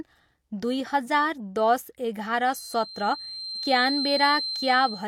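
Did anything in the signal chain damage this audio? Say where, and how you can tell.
Yes. From 2.47 s to the end of the speech, a thin, steady feedback whistle sits at 4.1 kHz, roughly 10 dB under the talker and swelling and fading slowly in level. That points to the analogue acoustic path. The likely cause is the loudspeaker's output leaking back into the microphone with loop gain hovering right at the edge. So one frequency keeps ringing without ever building into a full howl, and it just hangs there behind everything.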